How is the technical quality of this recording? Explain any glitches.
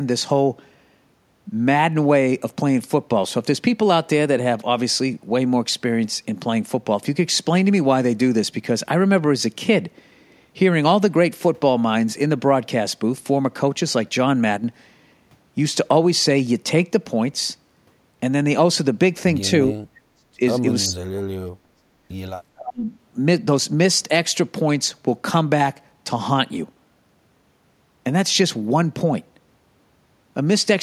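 The recording has two glitches, a brief level drop and a run of speech dropouts.

From 14.57 to 14.64 s the level falls abruptly by about 6 dB, likely one channel dropping out before the stereo pair is summed to mono.

At 19.67–20.40, 20.88–21.84 and 22.54–22.92 s the speech cuts out, dipping roughly 35 to 40 dB. This is likely speech suppressed in double talk, with the echo canceller ducking this talker.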